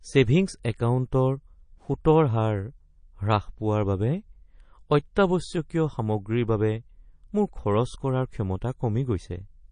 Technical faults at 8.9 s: MP3 compression

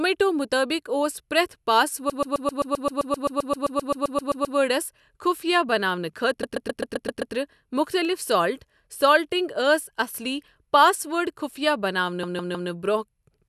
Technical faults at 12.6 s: repeated frames

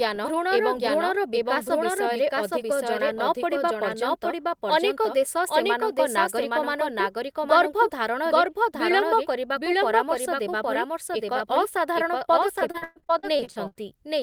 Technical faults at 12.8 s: doubled audio track; repeated packet loss (robotic sound)

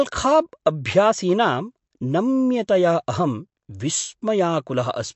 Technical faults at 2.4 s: MP3 compression

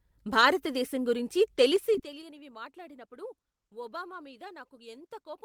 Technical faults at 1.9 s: zipper noise; lost packet rebuilt from error correction

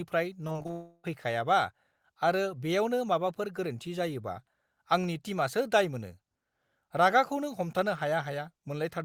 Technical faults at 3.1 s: none

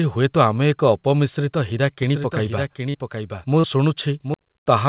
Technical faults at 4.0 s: doubled audio track

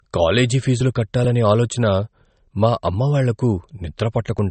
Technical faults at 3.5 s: low-bitrate audio saved at a high bitrate

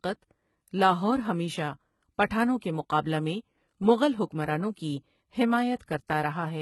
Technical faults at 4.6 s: HE-AAC compression

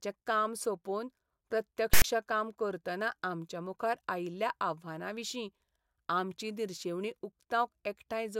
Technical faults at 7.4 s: none

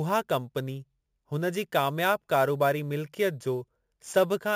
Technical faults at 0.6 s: imaging from sample-and-hold upsampling

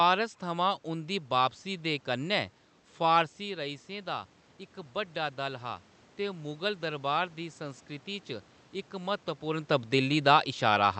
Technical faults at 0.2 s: none

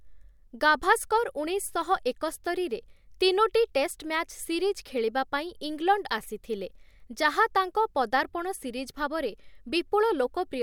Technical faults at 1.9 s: none

